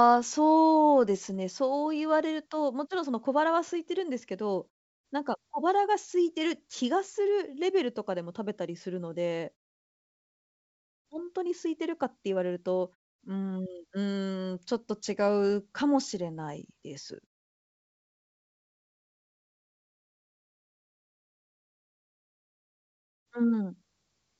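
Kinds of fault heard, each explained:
No faults can be heard in this speech clip.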